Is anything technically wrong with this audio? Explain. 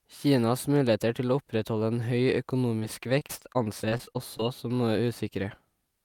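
Yes. Repeated packet loss gives a robotic sound from 2.79 to 4.41 s. Over a dozen short holes appear, none longer than about 27 ms. Each is filled by stretching the preceding speech. Roughly a sixth of the stretch is patched, so the speech turns choppy with pieces missing.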